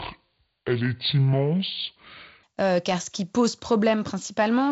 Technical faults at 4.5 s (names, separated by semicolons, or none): none